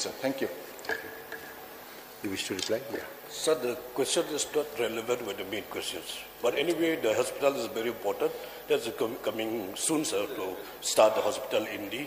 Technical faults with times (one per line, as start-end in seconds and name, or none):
none